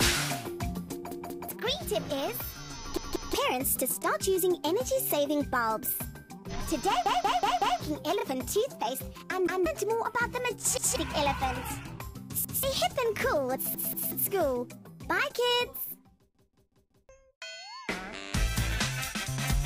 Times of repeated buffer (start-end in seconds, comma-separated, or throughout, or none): 1.11-1.49, 2.97-3.34, 7.06-7.80, 9.47-9.66, 10.77-10.96, 12.45-12.63, 13.75-14.12, 16.35-17.09